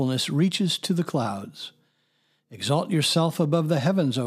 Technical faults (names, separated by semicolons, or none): none